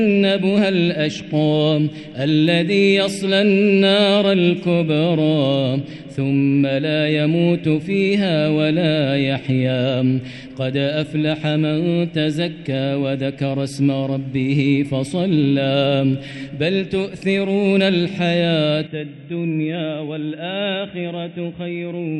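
At 18.87 s the sound abruptly turns dull and boxy, with nothing above 3.8 kHz, drops about 10 dB, and gains a faint new noise floor, with no gap at the switch. This is likely an input switched to a poorer device, through to the end.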